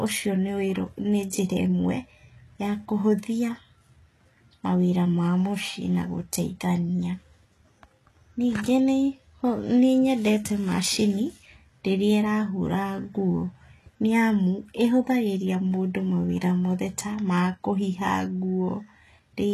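From the start the treble of the speech sounds false, with s sounds turning gritty and metallic, and nothing at all above 12.4 kHz. The damage is plainly audible throughout. The likely cause is HE-AAC compression at a very low bitrate, consistent with roughly 16 kbps. The codec keeps only the lower spectrum and fakes the top by copying lower bands upward under a coarse envelope, so the upper harmonics never quite match.

At 1.3 s a brief hiss, about 13 ms long, arrives just ahead of a sharp attack, which lands soft and smeared. This is pre-echo. The transform codec spread its quantisation noise across a whole block, and because the attack fell late in that block, noise sized for the loud onset leaked into the quiet moment before it.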